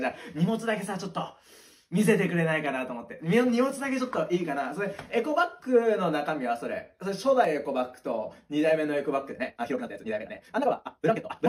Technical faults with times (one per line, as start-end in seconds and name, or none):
7.45-7.47 overlap between stream segments
9.29-11.49 time-stretched section